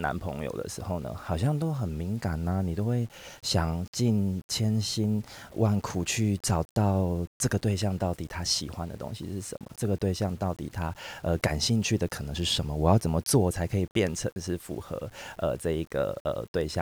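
Speech with low bit depth without dither across the whole clip: a grainy, signal-following distortion about 30 dB below the voice, likely from rounding to 8 bits. The waveform shows visible stair-steps, and the spectrogram shows broadband hash that appears and vanishes with each syllable.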